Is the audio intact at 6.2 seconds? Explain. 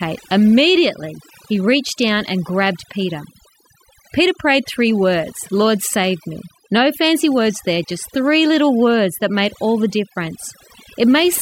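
No. At 6.2 seconds the speech is affected by overdone noise removal, which runs through the whole clip. The noise reducer is set too aggressively, so it cuts any frequency band close to its noise estimate, taking softer parts of the voice along with the noise. The background drops and breaks up into twinkling specks. A spectrogram would show a dark, patchy floor dotted with isolated bright points and ragged gaps in the speech harmonics.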